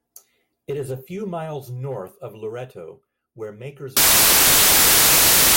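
From 3.97 s to the end at 5.57 s, the reader starts assembling each sample from the wrong bytes, whether from a one-byte offset, a swapped byte order or a wrong alignment, so the rapidly varying low-order bits land in the most significant position. The speech gives way to loud, harsh broadband noise for that final stretch of about 1.6 s.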